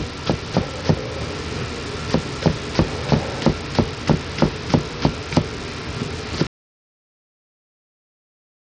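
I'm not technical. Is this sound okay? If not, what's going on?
No. Throughout, the treble flickers or drops out and a gritty haze sits on the sound, likely Bluetooth SBC compression starving the high frequencies of data.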